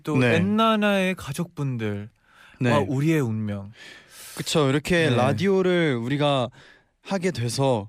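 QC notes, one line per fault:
Nothing stood out on listening to this speech clip.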